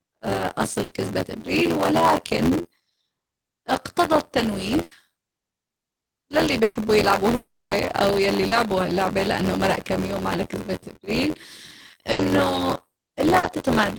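Throughout the speech, buffer tearing from a writer and reader crossing inside each period gives a steady 86.1 Hz robotic buzz. That rate fits a 512-sample buffer, with about a fifth of each period holding audio roughly 20 ms old.

At 0.83, 4.83, 6.63 and 12.11 s, a burst of packet loss drops 80 ms (120 ms at 6.63 s). Concealment holds the last sound as a fading buzz or hiss before the speech jumps ahead.

From 7.35 to 7.74 s, a long network dropout is the likely cause. About 360 ms is lost, heard as a held, decaying buzz or hiss ending in roughly 150 ms of silence.

At 8.47 and 13.39 s, short concealed packet loss patches about 40 ms by extending the previous sound, leaving a brief smear or wobble.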